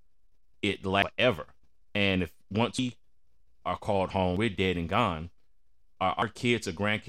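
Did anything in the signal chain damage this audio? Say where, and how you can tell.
Yes. Five abrupt splices point to dropped buffers (overrun), likely at the driver or buffer stage, where samples were overwritten before being read. Each is a jump with the speech skipping forward and no gap, at 1.02, 1.95, 2.79, 4.37 (between "are called" and "we're dead and") and 6.22 s. Roughly a third of a second vanishes at 1.02, 2.79 and 4.37 s, and about a tenth at the others. A waveform shows a sudden discontinuity, and a spectrogram shows a thin vertical broadband line with misaligned formants on either side.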